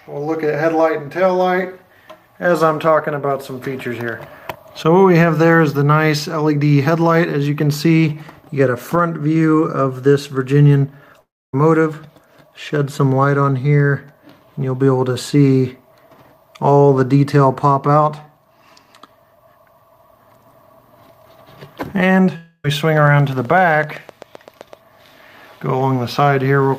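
The audio briefly turns to a fading buzz that drops to near silence from 11.20 to 11.54 s, and again, mostly buzz, from 22.36 to 22.65 s, both likely long network dropouts losing about 0.3 s each. From 23.07 to 24.74 s comes steady ticking, around fifteen clicks at 7.8 per second, about as loud as the sound, likely a train of clicks from interference.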